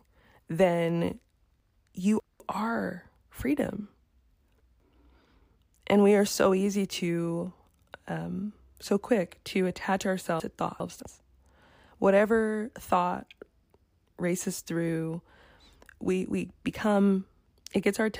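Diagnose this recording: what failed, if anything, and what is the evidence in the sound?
Three brief jumbled stretches interrupt the speech, at 1.6 to 2.4 s, 4.0 to 4.8 s and 10.4 to 11.0 s. The cause is chunks out of order at the buffer stage. Audio is handled in 200 ms blocks, and in each spot one block was delivered late, three blocks behind in the first two and two behind in the third. Nothing is missing, but each reshuffle leaves hard joins where unrelated waveform edges meet.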